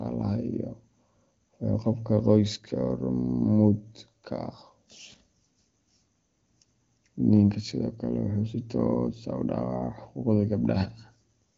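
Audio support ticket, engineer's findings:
Nothing stood out on listening to this speech over the AMR wideband (HD Voice) path, whose content tops out around 7.6 kHz.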